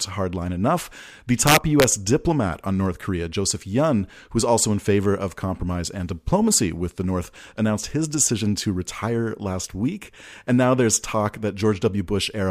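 From 1.47 to 1.84 s the speech shows integer overflow: peaks driven about 4 dB past the integer limit wrap around to the opposite sign instead of being held at full scale, so each one jumps across the whole range and produces violent, sharp cracks far harsher than clipping.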